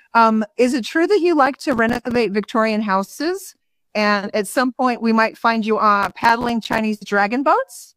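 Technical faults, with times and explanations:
1.46–2.16 s and 6.03–6.79 s, processor overload crackle: The sound breaks into a gritty, tearing crackle in two bursts, the second slightly longer. The processor could not finish each small audio buffer in time. Many deadlines were missed in a row. Each miss left a brief hole of silence with hard edges. The holes point to buffers of about 5 ms. Dozens of these clicks in quick succession fuse into crackle. It stops once the load eases.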